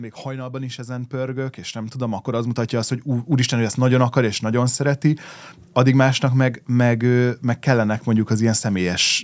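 A speech recording through call microphone processing, with nothing above 8 kHz, and it has automatic gain rising from 0.23 to 3.61 s. The AGC judged the input too quiet and pushed its gain up about 15 dB, so voice and background swell together until it settles just before "hogy ezt nagyon akar".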